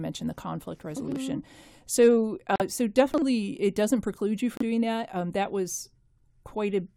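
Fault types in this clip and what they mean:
Chunks out of order: a 40 ms block of audio is played one slot late, after the block meant to follow it. Nothing is missing, but at 1.08–1.16 s and again at 3.14–3.22 s the sound briefly jumbles.
Bluetooth stall: playback cuts to silence and then resumes, likely because the wireless link held packets back until the headphone buffer ran empty. Here it is heard as a 43 ms gap at 2.56 s and a 32 ms gap at 4.57 s.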